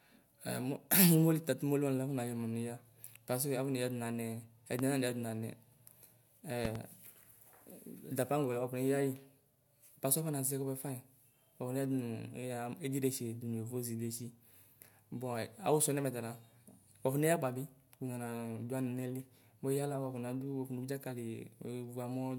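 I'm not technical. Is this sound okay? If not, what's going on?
No. There are two loud pops. Something in the recording chain, most likely a plug, switch, static discharge or a hiccup in the audio hardware, sent a sudden jolt of electricity into the signal. You hear that jolt as a sharp pop from 4.79 to 4.81 seconds, and as a quick double pop from 6.65 to 6.78 seconds. Both jump well above the level of the speech, which keeps going underneath them.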